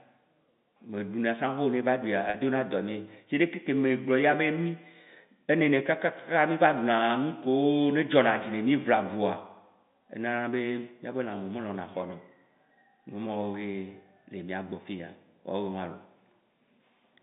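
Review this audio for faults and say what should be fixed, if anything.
Packet loss with pitch repetition occurs at 2.30 to 2.34 s, right after "vo ne eva ɖuia". About 40 ms of speech is missing, which fits two lost 20 ms packets. The receiver bridges the gap by repeating the last pitch period, so the sound briefly holds as a slightly buzzy sustained tone instead of dropping to silence. That continuity is what separates it from a plain dropout, and the narrow telephone band of the G.711 line is heard around it. Prevent it with forward error correction or a larger jitter buffer on the network path so that packets arrive intact.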